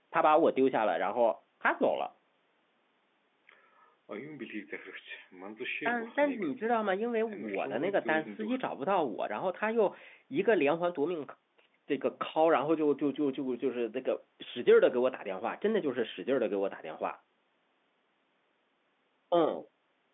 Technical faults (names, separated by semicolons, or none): none